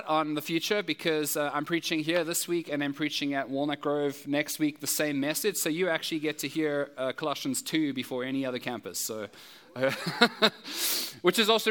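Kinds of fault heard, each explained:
Nothing stood out on listening.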